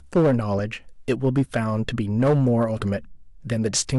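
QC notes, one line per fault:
throughout: hard clipping. The signal is driven about 7 dB past what the stage can pass, so a few percent of samples have their peaks cut flat. Those flat tops add high harmonics, heard as a harsh fuzz on the louder parts of the speech.
0.59 s and 2.59 s: corrupt frame decoded. Each is a brief chirp or burst of noise, peaking around -20 dBFS. It fits one damaged compressed frame at the first time and two at the second, played with misread gains or codes that put energy at the wrong frequencies.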